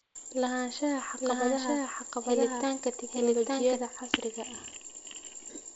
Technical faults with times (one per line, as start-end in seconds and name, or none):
1.00-3.78 doubled audio track